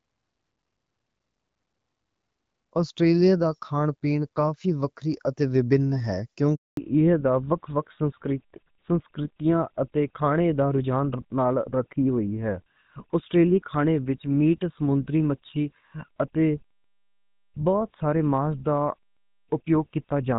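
At 6.55 s a handover gap cuts the speech abruptly, leaving 220 ms of silence until 6.77 s while the call switches networks and no frames arrive. From 6.77 s to the end, fallback to narrowband strips everything above 4 kHz, so the speech, previously clear HD Voice, turns dull and rougher, consistent with GSM full rate.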